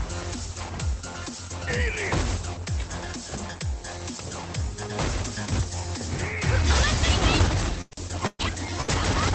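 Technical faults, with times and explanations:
7.81–7.94 s, 8.27–8.42 s and 8.81–8.91 s, burst of packet loss: a run of packets went missing each time. The receiver stretched the last bit of sound for about 98, 117 and 69 ms, fading it down, with a short silence of about 30 ms in the second. Then playback jumps ahead, skipping about 60, 120 and 60 ms.
7.91–7.97 s, 8.39–8.45 s and 8.88–8.94 s, lost packet rebuilt from error correction: near the end of each burst, about 60 ms was filled in from the low-bitrate backup copy carried in the next packet, so there's no gap. Those stretches sound grainier and noisier than the audio around them.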